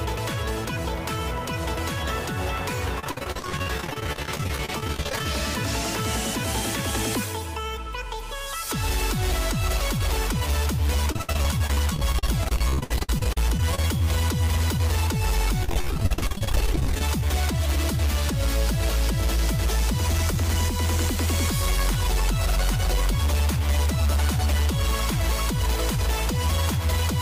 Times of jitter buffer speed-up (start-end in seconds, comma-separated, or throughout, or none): 17.07-17.48